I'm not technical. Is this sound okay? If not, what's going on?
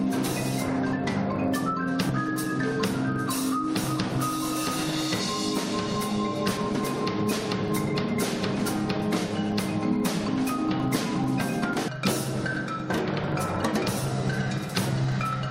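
No. A steady low buzz, about 25 ticks per second, runs throughout and follows the loudness; this is a filter restarted on every block, losing its state each time.

Small jumps forward occur at 2.09, 5.29, 6.57, 10.28 and 11.73 s, each skipping a fraction of a second. The likely cause is a dropped buffer (overrun).

At 11.87 s the sound jumps ahead with a small blip, likely a stream segment skipped during playback.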